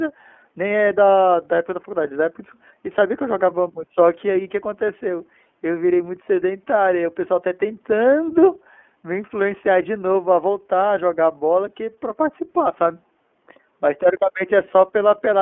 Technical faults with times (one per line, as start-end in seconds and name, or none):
0.00-15.41 iLBC codec